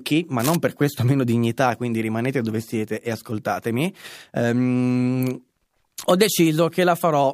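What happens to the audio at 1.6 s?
Nothing goes wrong at 1.6 s; the speech carries on intact through that moment, with no dropout, click or distortion to be heard.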